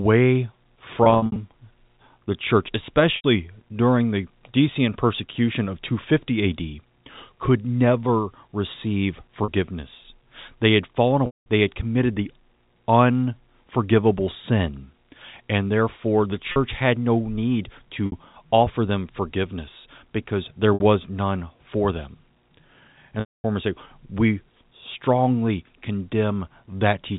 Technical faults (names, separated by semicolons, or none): packet loss with pitch repetition